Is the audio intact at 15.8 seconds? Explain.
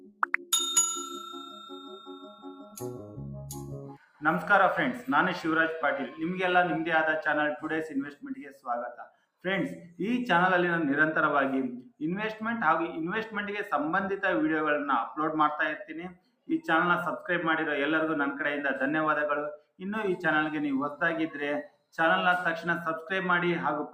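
No. From 15.83 to 16.49 s the sound sinks sharply, falling by about 18 dB at its deepest, so that a held or fading part seems to vanish or have its tail clipped while any sudden onsets still poke through. Altogether about 0.4 s is affected. This is sound cut by the noise suppressor: the processor mistook that stretch of steady or decaying sound for background noise and pulled its gain down much harder than elsewhere.

That dip sits on top of a noise suppressor applied to music or sounds, which affects the whole clip, including this moment. A suppressor designed for speech keeps estimating a noise floor and subtracting it, so sustained tones, ambience and reverb are treated as noise to remove. Its gain wanders by roughly 5 dB, which you hear as pumping or fluttering and a thinner body, with attacks surviving better than sustains.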